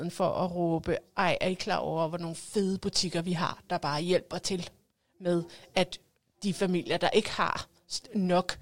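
No technical faults can be heard anywhere in the speech. There is no moment in the recording where the signal chain audibly goes wrong.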